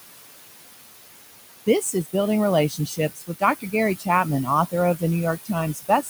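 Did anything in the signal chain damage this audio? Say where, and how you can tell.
Yes. Noise suppressor artifacts run through the whole clip, from the call-processing stage. The room noise, sitting about 10 dB under the speech, is pulled down by about 19 dB in the gaps and swells back under each phrase.

Speech cut by the noise suppressor appears at 1.66–2.14 s, 2.69–3.42 s, 3.98–4.07 s and 5.74 s to the end. The suppressor mistook quiet speech for noise and dipped it by about 14 to 20 dB, so those parts sound swallowed.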